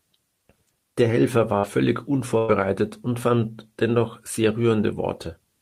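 At 1.59 s, short concealed packet loss cuts into the speech for about 40 ms, until 1.65 s. That slice of the call did not reach the decoder in time. The receiver covered the hole by extending the sound just before it, then blended back into the real signal. The result is a brief smear. The audio wobbles for an instant and then carries on.

From 2.38 to 2.50 s, a burst of packet loss takes out about 100 ms of speech. Several packets in a row were lost or arrived too late to play. The receiver stretched the last sound across the whole gap and faded it as the gap went on. There is no silent stretch. The listener hears a held, fading tail. The audio then resumes at "und fand dennoch sehr", with the part in between gone.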